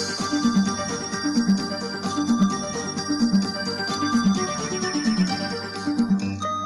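Hard clipping hits six short loud passages at 0.45–0.61, 1.38–1.53, 2.31–2.45, 3.23–3.37, 4.15–4.28 and 5.08–5.32 s, overdriven by about 2 to 4 dB. The peaks are sheared flat, adding a gritty high crackle. Unlike soft saturation's rounded warmth, it stays abrupt, bright and confined to the peaks.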